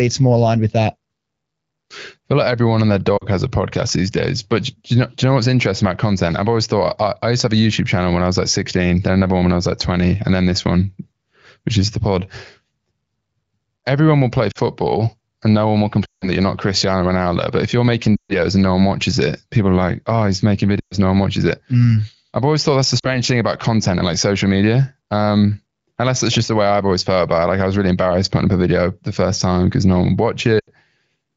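Lost AMR speech frames occur at 3.17, 14.51 (after "everyone will play"), 16.05, 18.16 (between "if you're making" and "and no one watches"), 20.80, 22.99 (between "always thought that's the" and "thing about content and") and 30.59 s. Corrupted radio frames force the decoder to repeat the last good pitch and vocal tract settings at falling gain. The 40 ms gaps are brief. The 120–160 ms runs at 16.05, 18.16 and 20.80 s drop to near silence within two frames before speech returns rough. The light AMR-WB coding at 15.85 kbit/s keeps speech clear.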